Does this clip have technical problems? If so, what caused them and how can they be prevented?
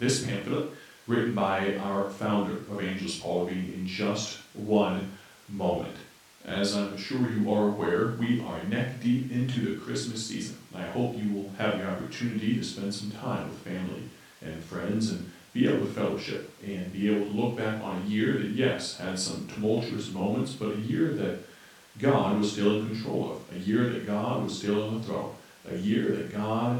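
No, there are no technical problems in this recording.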